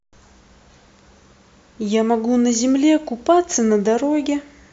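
Speech recording with no technical faults detected anywhere in the audio.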